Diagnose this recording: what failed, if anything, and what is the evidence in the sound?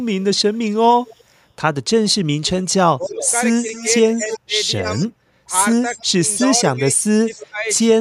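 Call processing is where this fails. A delayed copy of the speech trails the talker in three stretches. From 0.2 to 1.24 s it is faint, roughly 30 dB down, arriving 286 ms late. From 2.09 to 5.07 s and from 5.95 to 7.45 s it is much stronger, around 15 dB below the speech, at 294 ms and 302 ms. This is echo leak: the far end's loudspeaker output is reaching its microphone and likely escaping an echo canceller that has not fully converged.

The near talker's level also collapses while the other side is talking, which is speech suppressed in double talk. A short dip of around 10 dB occurs between 2.98 and 3.23 s. A longer passage runs from 3.83 to 7.69 s, with drops reaching roughly 20 dB and about a second and a half of speech pushed down in total. Both stretches overlap the strong echo, so the suppressor is likely misreading local speech as echo and attenuating it along with the leak.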